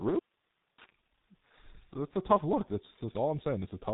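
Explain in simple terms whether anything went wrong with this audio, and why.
Something did go wrong. The whole clip has passed through the G.723.1 codec, an old internet-phone format that squeezes speech very hard. It keeps nothing above about 3.8 kHz, so the speech sounds muffled and dull from start to finish. The codec rebuilds the voice from a rough model that changes only in slow steps. That leaves it hoarse and rough, and the consonants smear together. The damage here is heavy.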